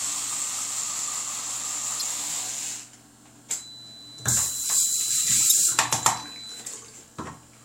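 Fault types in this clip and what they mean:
Damaged data in a compressed stream: Corrupt bytes throw the decoder off its frame sync until it finds the next header. Here that gives two short glitches, at 1.98 to 2.02 s and again at 5.48 to 5.52 s.
Feedback whistle: From 3.52 to 6.68 s a thin, steady tone near 4 kHz sits well under the main sound, roughly 15 dB down, swelling and fading slowly in level. That's likely a speaker-to-mic loop hovering right at the edge of feedback without taking off.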